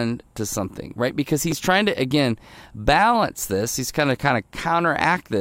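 A repeated buffer at 1.51 s, just before "trying to again balance": late audio made the device replay a roughly 6 ms piece twice, heard as a brief buzzing click.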